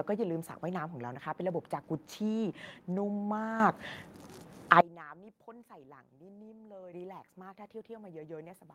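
At 1.93 to 1.95 s a lost packet rebuilt from error correction leaves no gap. A short stretch, consistent with one 20 ms packet, turns rougher and noisier. The next packet carried a low-bitrate copy, and the decoder played that copy instead of masking the loss with a fade or a stretched sound.

At 3.6 s and 6.93 s the microphone volume steps up, by about 10 dB and then about 7 dB. Both the speech and the background noise jump at once, in a single step rather than a gradual rise. That fits the device's input volume being raised.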